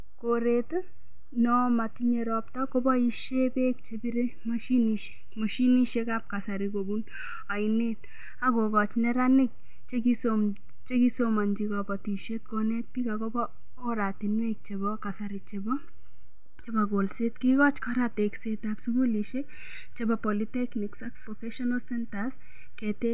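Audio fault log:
No fault is heard in this speech clip.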